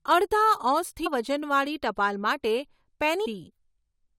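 Damaged data in a compressed stream at 1.05 s and again at 3.25 s: corrupted bytes inside the encoded speech make the decoder misread those frames and lose sync while it hunts for the next valid header, leaving a brief chirp or blip each time.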